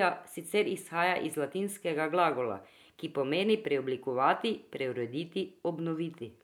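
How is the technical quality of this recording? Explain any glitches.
No audible glitches or faults.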